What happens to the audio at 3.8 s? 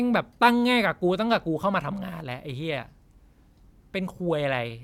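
Nothing goes wrong at 3.8 s; the speech carries on intact through that moment.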